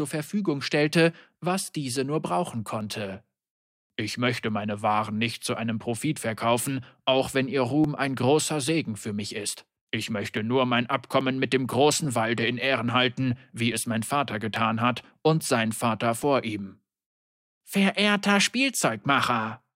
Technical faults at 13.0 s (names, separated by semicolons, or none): clock drift buffer slips